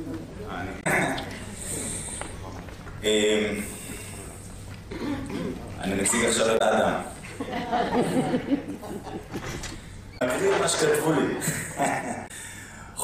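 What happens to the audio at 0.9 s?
A brief glitch lasting about 70 ms from 0.80 to 0.87 s sits just before 0.9 s. This is damaged data in a compressed stream. A stretch of the encoded bytes was corrupted there, so the decoder could not read those frames correctly, lost sync, and skipped forward to the next valid frame header. The garbled decode gives the glitch.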